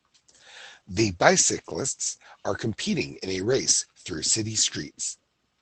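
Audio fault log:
3.45–3.71 s, lost packet rebuilt from error correction: dropped packets were replaced by low-bitrate copies carried in the following packets, so 140 ms of sound turns rougher and noisier, with no gap.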